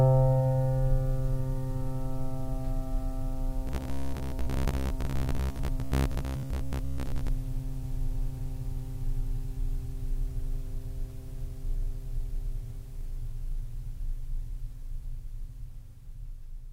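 It's a music clip, and from 3.67 s to 7.28 s it picks up robotic sound from repeated short buffers: the music collapses into a stiff, metallic buzz pitched at 66.8 Hz that only loosely tracks what's underneath. That fits a loop of about 15 ms. The likely cause is new audio arriving too late, so playback keeps re-looping that last slice to cover the gap. Roughly 70 percent of that stretch is repeated material rather than the real music.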